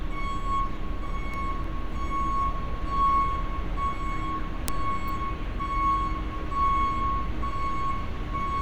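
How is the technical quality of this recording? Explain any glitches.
Two brief glitches stand out, at 1.34 s and 5.08 s, each a sharp snap laid on top of the sound. They're likely electrical switching spikes, a nearby switch or motor arcing and the audio line catching that burst as a tight click.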